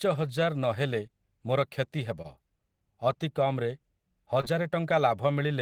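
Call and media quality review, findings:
Short stall from a late packet, 2.22–2.26 s: jitter buffer ran dry, decoder held the last speech sound about 24 ms until the packet arrived; nothing lost, playout delay up 24 ms.

Short concealed packet loss, 4.41–4.45 s: about 20 ms of speech never arrived; concealment extended preceding sound for 21 ms, then blended back, leaving a brief smear.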